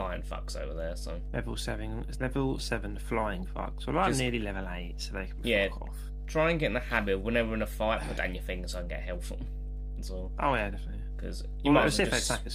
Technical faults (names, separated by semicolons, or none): mains hum